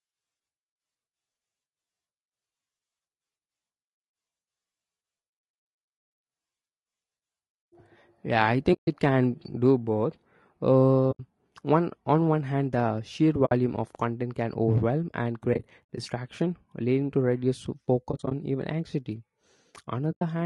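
Low-delay AAC compression runs through the whole speech clip: the voice sounds rough and grainy, with noise between the harmonics. This is likely AAC-ELD at a rate that fits about 32 kbps, whose short frames resolve pitch poorly. AAC frame loss with muting leaves soft-edged holes where the decoder zeroed the missing spectrum, fading the sound out and back in. These holes fall at 8.73 to 8.88 s; at 11.11 to 11.20 s; at 13.45 to 13.52 s, right after "one hand the sheer"; at 15.53 to 15.99 s, after "can overwhelm and", as scattered short gaps with the longest around 70 ms; at 18.11 to 18.32 s, also broken up; and at 20.11 to 20.22 s.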